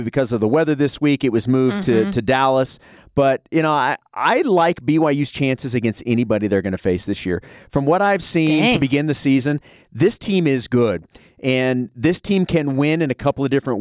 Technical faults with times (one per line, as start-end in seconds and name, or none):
none